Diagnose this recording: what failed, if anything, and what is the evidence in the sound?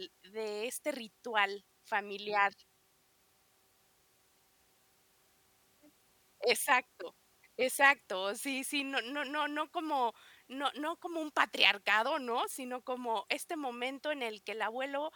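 Nothing in this speech recording points to a failure at any stage of the chain, from analogue wiring through conversion, buffering, processing, transport, storage or playback.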